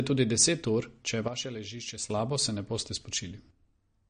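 Speech, with plainly audible codec damage throughout. Nothing is present above 9.6 kHz, and the remaining sound has a watery, swirling quality. This is likely MP3 compression at a low bitrate, around 40 kbps. Short of bits, the encoder cuts the treble and drops weak frequency lines frame by frame. At 1.28 s, just after "deset ur če je", the level suddenly drops by about 10 dB. Speech and background noise fall together. At 2.10 s, just before "se ne boste", the level jumps back up. A likely sudden gain jump, applied without a ramp.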